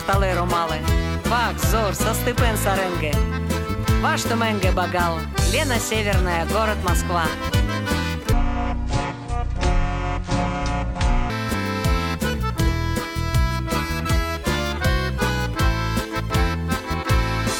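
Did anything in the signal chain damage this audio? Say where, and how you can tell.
Yes, damage shows up at two stages. At the codec or storage stage, compressed frames are skipped at 7.48 s and again at 11.53 s. Each time the audio jumps forward, by about 100 ms at the first point and about 50 ms at the second. That fits whole frames of about 23.2 ms being lost, roughly four and then two. The joins sound like brief smeared blips, not sharp clicks, because adjacent frames overlap and blend the cut.

At the playback or editing stage, the section from 8.33 s to 11.30 s plays at the wrong speed, 0.544 times the original rate. Pitch falls with it, by roughly ten semitones, so the sound turns deep and dragging for those three seconds before returning to normal. Because speed and pitch shift together, this is a resampling or clocking error and not a pitch effect. The likely cause is that segment being played or conformed against a mismatched sample clock.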